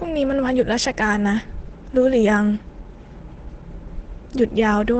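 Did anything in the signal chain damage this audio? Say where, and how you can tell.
Yes, at the codec: the speech sounds muffled and hoarse throughout, with nothing above 8.8 kHz. That likely points to heavy Opus compression at a low bitrate in its SILK speech mode.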